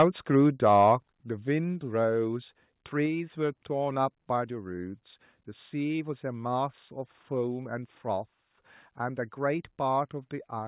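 At 0.00 to 0.03 s the opening peak is flattened by microphone overload, about 5 dB past the converter's limit. Around a tenth of the samples are squared off there, so the onset crackles harshly. The likely cause is an input volume set too high for the converter. At 0.02 s the microphone volume steps down by about 2 dB, likely the call software reacting to that clipped peak. Everything, voice and room alike, drops at once.

Overload returns at 0.34 to 0.38 s, about 1 dB over, with only a small share of samples cut. It adds a brief rasp. At 0.66 to 0.91 s it is stronger, about 2 dB over, with a few percent of samples clipped. That gives a longer, gritty edge on the loudest syllables.

Further step-downs follow at 1.02 s (about 5 dB), 3.06 s (about 2 dB) and 10.59 s (about 1 dB). The 1.02 s drop is the most obvious, a sudden sag in level just after the distorted stretch. The later two are subtler. 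Each lowers the whole signal in one jump, not as a fade.

Throughout, the call path's narrowband coding limits the audio to below 4 kHz, which fits G.711 A-law at 64 kbps.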